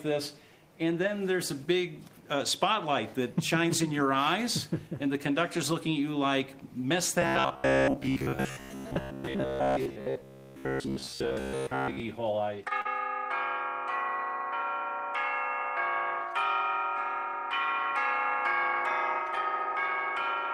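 From 7.22 to 12.0 s the sound turns into a rigid, metallic buzz near 66.8 Hz. This is robotic sound from repeated short buffers. The likely cause is audio arriving too seldom, so a chunk of about 15 ms was replayed again and again in place of most of the real signal.

At 12.81 s comes a short concealed packet loss. About 40 ms of audio never arrived in time. The receiver covered 34 ms of it by extending the preceding sound, then blended back. It is heard as a brief smear or wobble.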